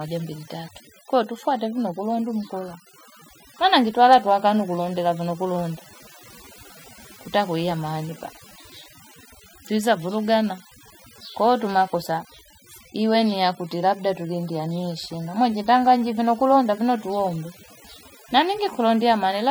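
From start to finish the speech has overdone noise removal: the denoiser's cutting bands near its noise estimate, leaving twinkly near-silence between phrases.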